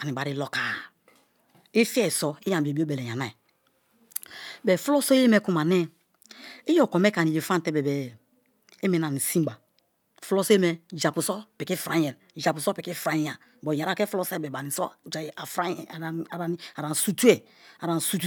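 No technical faults are audible.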